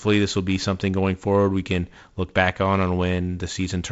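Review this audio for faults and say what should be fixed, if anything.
No faults turn up in this audio, so nothing needs to be fixed.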